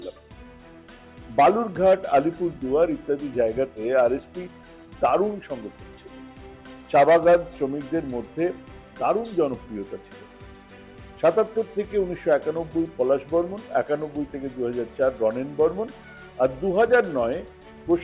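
Nothing stood out as a technical problem on listening to this audio.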